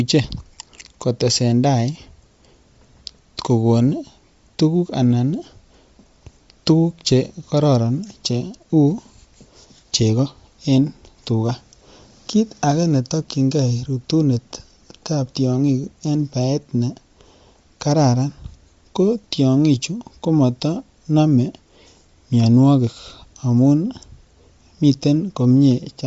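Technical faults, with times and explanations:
throughout, Bluetooth LC3 compression: a low-bitrate transform codec, likely Bluetooth LE Audio's LC3, discarded much upper-band detail and filled it with noise, giving the speech a plainly audible grainy, breathy edge and nothing above 7.7 kHz, which fits a bitrate near 32 kbps.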